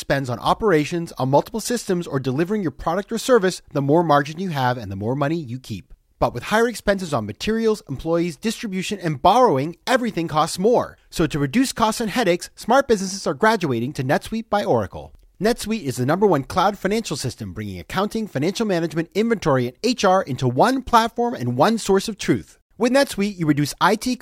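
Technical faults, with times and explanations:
Nothing stood out on listening to this speech recording.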